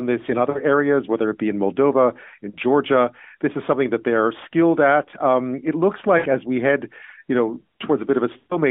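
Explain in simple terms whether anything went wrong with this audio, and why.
Yes, something went wrong: this speech has lost AMR speech frames, four times. At 0.50 to 0.60 s (between "this in" and "areas whether it be"), 2.50 to 2.57 s, 6.18 to 6.28 s (between "it looks" and "as we head you") and 8.38 to 8.59 s, the phone decoder missed damaged pieces and filled in by stretching the last sound while fading it. Unlike a plain dropout, you hear a brief drawn-out sound fading away rather than sudden silence, longest in the final event.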